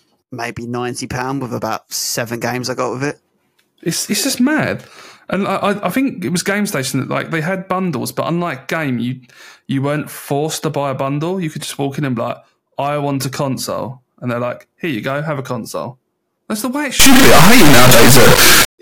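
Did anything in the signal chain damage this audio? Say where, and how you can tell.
Yes. Integer read as float hits the sample-format conversion stage from 17.00 to 18.79 s, right after "the way it". The speech collapses into a brutally loud, buzzing square wave that drops to silence where the signal goes quiet. That fits 32-bit integer samples being read as 32-bit float. Their bit patterns decode as values either vanishingly small or huge, so the output slams between zero and the clipping ceiling.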